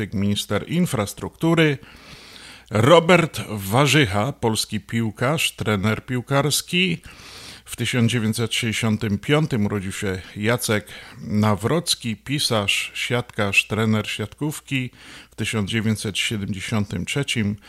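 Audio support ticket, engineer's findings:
Engineer's findings: no audio fault found in the speech recording.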